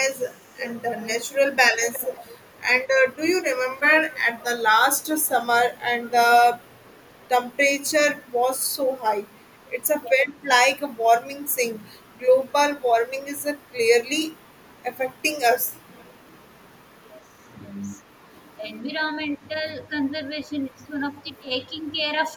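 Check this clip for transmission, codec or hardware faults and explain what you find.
Two recurring echo-canceller faults are present in the speech.

Echo leak at 0.15–2.6, 3.75–7.25, 9.38–10.35 and 15.6–16.19 s: a faint copy of the speech returns 367 ms late, between about 20 and 40 dB down. It is likely residual loudspeaker pickup that a far-end canceller failed to remove.

Speech suppressed in double talk at 1.48–2.82, 10.03–11.85, 14.61–14.66 and 16.96–22.37 s: the talker dips by up to about 15 dB in chopped pieces while the other side speaks. The likely cause is a canceller turning down both its own talker and the loudspeaker echo together.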